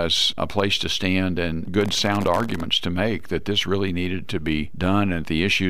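From 1.81 to 2.60 s a gritty burst of crackle tears across the sound, then stops. This is processor overload crackle: the processor fell behind on its very small audio buffers, and dozens of missed deadlines each left a hard-edged sliver of silence.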